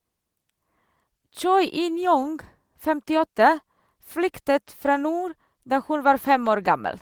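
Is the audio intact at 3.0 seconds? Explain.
Yes, the audio is intact at 3.0 seconds: the speech there plays through without any dropout, glitch or other technical fault.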